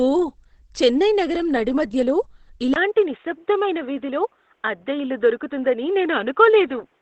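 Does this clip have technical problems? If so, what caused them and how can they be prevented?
Yes. The whole clip sounds muffled and hoarse, with heavy damage and nothing above 8.6 kHz. This is likely Opus compression falling back to its speech mode. It suggests a bitrate near 12 kbps. Encode at a higher bitrate to prevent it.

At 2.74 s there is a 20 ms gap. From then to the end, nothing passes above 3.8 kHz, and a faint new noise floor appears. The level stays about the same. This is likely the input switched to a poorer device, such as a headset's call profile. Lock the input device before recording to prevent it.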